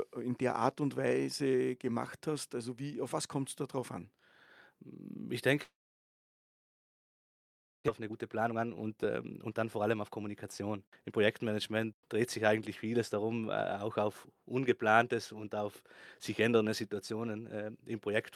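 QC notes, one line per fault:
5.63 to 7.90 s, long network dropout: sound thins into a brief fading buzz, then about 2.1 s of near silence; likely a stall in arriving packets, 1.6 s lost outright.
8.00 to 11.17 s, jitter buffer speed-up: speech runs about 19% fast at unchanged pitch, sounding hurried, as the receiver trims pitch-period slices to shed roughly 0.7 s of backlog.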